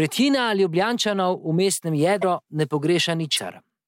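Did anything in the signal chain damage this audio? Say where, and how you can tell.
Yes. The likely cause is a broken MP3 bit reservoir at the codec stage: after a gap, the next frame reached back for borrowed data and decoded wrong bytes. The speech skips ahead with a brief glitch at 2.21–2.24 s and 3.36–3.39 s, each about one 26 ms frame.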